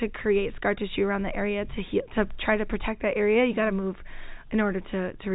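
No technical faults are present.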